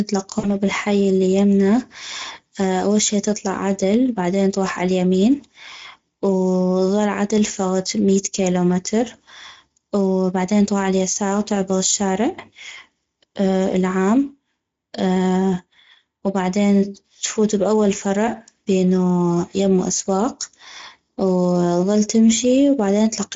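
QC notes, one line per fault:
Throughout: Speex codec damage is plainly audible. The speech sounds hoarse and noisy because the CELP coder has few bits for the excitation. Detail above 4 kHz is a shaped noise fill, which fits a rate near 16.8 kbps.
0.39 to 0.55 s: VoIP packet loss concealed by the speech codec. About 40 ms of audio went missing. The decoder stretched its last pitch and filter into a fading buzzy tone or coloured noise. The sound stays weak or distorted into "بالحي الي".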